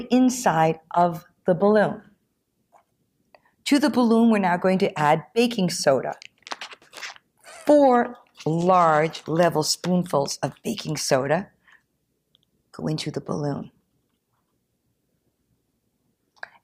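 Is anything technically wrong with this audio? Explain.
No, nothing technically wrong jumps out here; it all sounds just as it should.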